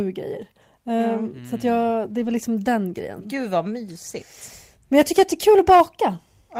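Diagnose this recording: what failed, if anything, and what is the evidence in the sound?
Packets were lost on the network between 2.09 and 2.35 s, between "att jag" and "den grejen", and the codec covered the loss as a lost packet rebuilt from error correction. Each following packet carried a low-bitrate duplicate of the missing one, and the decoder played those duplicates, so there is no gap. The rebuilt stretch, about 140 ms, which fits seven 20 ms packets, sounds rougher and noisier than the surrounding speech.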